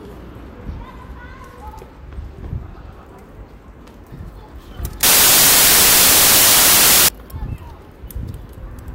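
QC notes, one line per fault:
5.03–7.08 s, wrong sample width: the sound turns into loud hiss with the original buried underneath, slowed to about 0.75x and pitched down. That fits 32-bit samples being read as packed 24-bit, so most values are stitched from mismatched bytes and only fragments keep their true top bits.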